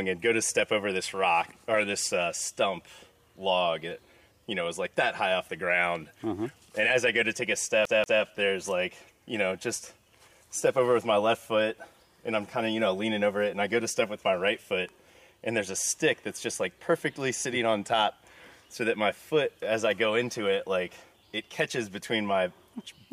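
A short audio clip with one clear problem: from about 7.85 s to 8.23 s the sound gets caught in a CD stuck on one turn. A slice of roughly 0.19 s plays twice in a row, with a tiny mute at each jump back, so you get that quick, even stutter of a skipping disc. What's happening is a scratch knocking the laser back one track at the same point on the rotation, so the same fragment comes round again.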